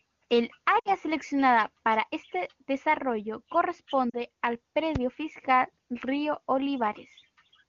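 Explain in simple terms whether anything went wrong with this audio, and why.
Lost AMR speech frames at 0.80 to 0.95 s, just before "seleccionada para este desarrollo", and at 4.10 to 4.17 s: radio errors corrupted short chunks of the call, so the phone guessed the missing sound and briefly smeared or dipped it.

A loud pop at 4.96 to 4.98 s: one sharp click sits on top of the speech, which carries on underneath, likely from a sudden electrical jolt such as static or a switch.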